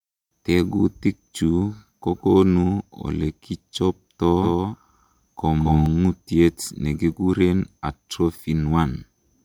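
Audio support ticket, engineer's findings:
Doubled audio track, 4.42–5.86 s, right after "kokonu olekichobto". Speech repeats about 200 ms late, about 5 dB down, dry, full-band, abrupt onset and cutoff. Likely a second, slower capture path or misaligned edit mixing duplicate copies.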